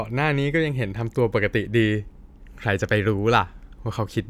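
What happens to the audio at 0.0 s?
Nothing goes wrong at 0.0 s; the speech starts cleanly, with no dropout, click or distortion at that point.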